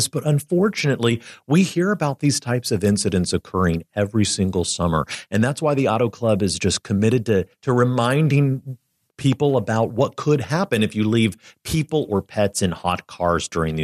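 Nothing stood out on listening to this speech recording.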